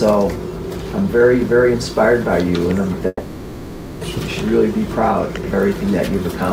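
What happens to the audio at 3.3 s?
A long network dropout runs from 3.07 to 4.03 s, likely from a stream that stopped arriving. The receiver stretches the last sound into a fading buzz or hiss, leaving about 30 ms of silence, and the audio resumes at 4.03 s with roughly 0.94 s missing.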